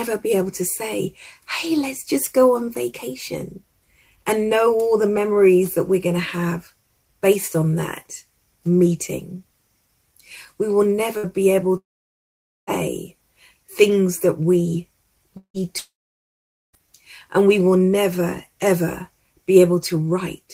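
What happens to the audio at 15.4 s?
At 15.4 s the audio falls into what is likely a long network dropout, spanning 15.37 to 15.57 s. With no incoming data, the receiver extends the last sound for about 170 ms as a buzzy or hissy tail that fades away, then leaves about 90 ms of silence. When the signal resumes at 15.57 s, roughly 180 ms of the original material is simply gone, so playback jumps ahead rather than picking up where it stopped.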